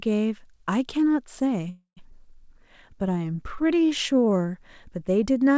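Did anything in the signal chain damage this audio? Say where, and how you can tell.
Yes. The damage comes from the network and jitter-buffer stage of a call path. The audio is band-limited to 8 kHz, as a wideband call codec would leave it.

Call audio freeze, 1.70 to 1.99 s. The jitter buffer ran dry, likely because packets were held up in transit. The receiver stretched the last sound into a fading buzz or hiss, which ends in about 110 ms of silence. About 267 ms of fill is inserted. When speech resumes it picks up exactly where it stopped, so nothing is lost, but the playout falls about 0.27 s behind.

Skip ahead, 2.11 to 2.13 s. Here a stretch of audio was discarded while later packets were already queued, either lost on the network or dropped by the buffer to shed its backlog. Roughly 150 ms of speech is gone. The two sides are butted together with only a few milliseconds of fill, so you hear an abrupt forward jump rather than a gap.

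Jitter buffer slow-down, 2.48 to 4.43 s. The buffer was rebuilding its reserve, so it repeated individual pitch periods and fragments of pauses many times in a row. This adds about 170 ms and plays the speech at 92% speed. The pitch stays the same, but sounds are audibly drawn out.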